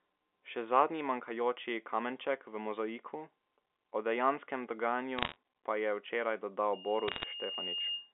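Bits flipped on the digital phone line corrupt scattered samples of the G.711 stream between 5.18 and 5.36 s, at a bit error rate of somewhere under one percent. Each corrupted sample throws the waveform off course for an instant, and where the sign or a high-order bit is hit the jump is large. The bit errors on the digital phone line come through as a short burst of sharp ticks and crackle laid over otherwise intact speech, still confined to the telephone band of roughly 300 Hz to 3.5 kHz.

From 6.73 s to the end of the clip, at 8.12 s, the microphone is picking up the loudspeaker it drives, and at 2.8 kHz the loop gain exceeds one. That frequency feeds on itself, so a loudspeaker feedback squeal builds from nothing over about a second into a steady piercing tone about 5 dB below the speech. It is still sounding when the audio stops.

Between 7.08 and 7.24 s a second run of bit errors adds the same brief crackle on top of the squeal.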